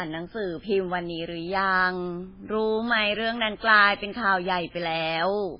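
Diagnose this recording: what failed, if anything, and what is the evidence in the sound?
Throughout, the speech sounds watery and swirly, with no treble above 5.3 kHz, likely heavy MP3 compression at the codec stage, at a bitrate near 16 kbps.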